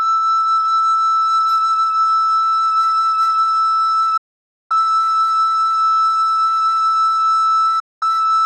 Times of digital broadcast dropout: 4.17-4.71, 7.79-8.03

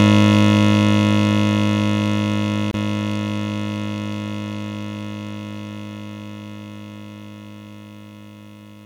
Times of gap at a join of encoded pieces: 2.71-2.74

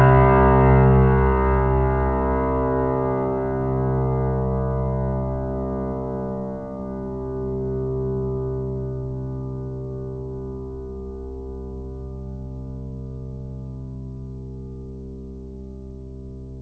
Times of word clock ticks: none

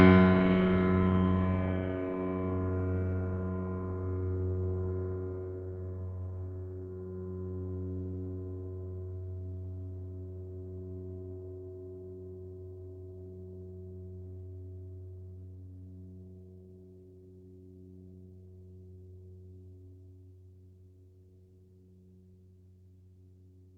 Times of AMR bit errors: none

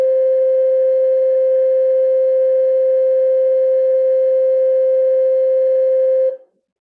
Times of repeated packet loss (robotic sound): none

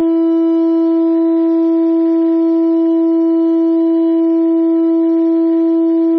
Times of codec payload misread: none

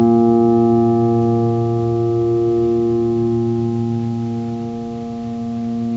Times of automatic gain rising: none

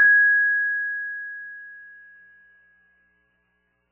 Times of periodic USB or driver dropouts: none

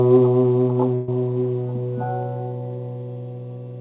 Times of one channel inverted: none

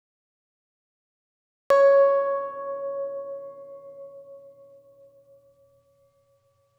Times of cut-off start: 0.00-1.70

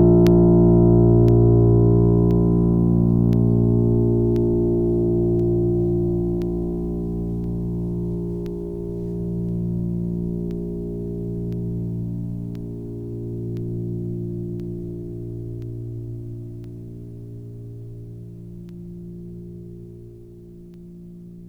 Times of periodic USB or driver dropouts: 0.27-20.74

